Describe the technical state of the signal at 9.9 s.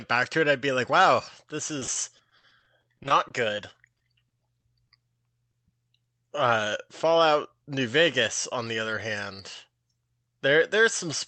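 At 9.9 s the signal is inside a jitter buffer speed-up that runs from 9.68 to 9.99 s. The receiver had built up excess buffered audio and trimmed it by repeatedly cutting out short pitch-period-length pieces, about 40 ms in total. The speech plays at about 111% speed with unchanged pitch and sounds hurried. On a waveform the periodic cycles keep their length but fewer of them remain; on a spectrogram the harmonics stay level while syllables shorten.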